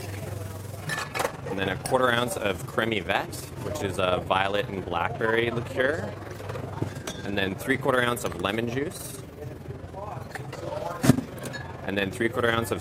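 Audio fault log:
throughout, overlap-add ripple: a fast, rough flutter, the level swinging by about 6 dB roughly 20 times a second, because overlapping windowed frames were rejoined without summing to constant gain.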